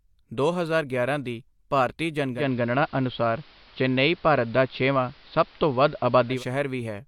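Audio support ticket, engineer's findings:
Digital radio blending to analogue, 2.33–6.44 s: speech cross-fades over 161 ms onto AM, level shifts about 4 dB, hiss roughly 30 dB down.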